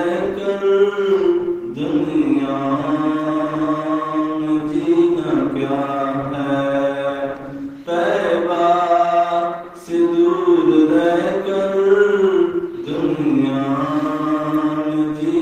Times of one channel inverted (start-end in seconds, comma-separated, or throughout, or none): none